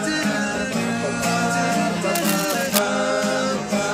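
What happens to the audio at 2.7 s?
At 2.7 s, cable scratch noise runs from 2.15 to 2.79 s: dense, uneven crackling nearly as loud as the sound, likely a worn connector's shifting contact. Spectrogram shows broadband vertical speckle; waveform, ragged spikes.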